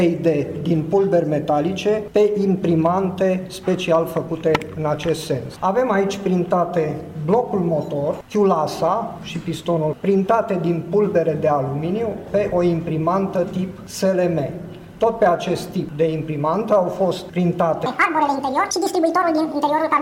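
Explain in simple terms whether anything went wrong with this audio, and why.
Near the end, something goes wrong. From 17.86 s to 20.01 s, there is a section at the wrong speed. That last stretch plays 1.8 times faster than it should. Because speed and pitch are tied together, the sound also jumps up by roughly ten semitones. It turns high and hurried all at once. The likely cause is that this part was played back or edited against the wrong clock.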